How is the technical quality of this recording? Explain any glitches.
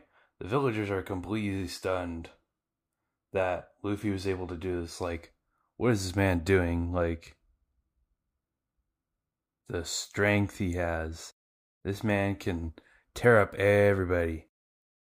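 No technical glitches are audible anywhere in the recording.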